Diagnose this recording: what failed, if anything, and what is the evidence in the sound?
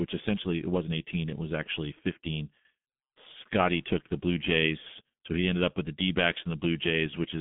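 The codec's the culprit here: it's G.723.1 damage all the way through the speech. There's nothing above about 3.8 kHz, the band sits roughly 150 Hz to 3.5 kHz, and the voice comes out muffled and hoarse with smeared consonants. That fits the roughly 6 kbit/s mode, where each 30 ms frame gets a coarse, slowly updated voice model.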